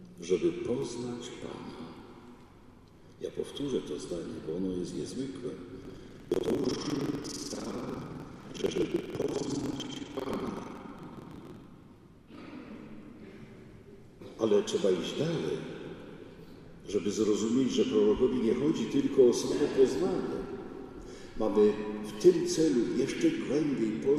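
From 5.81 to 11.66 s, the ring buffer's writer and the hardware reader slip out of step, causing buffer tearing. Roughly two-fifths of each period replays audio about 150 ms old, hard-joined both sides, producing a robotic 21.5 Hz rattle, which fits a 2048-sample buffer.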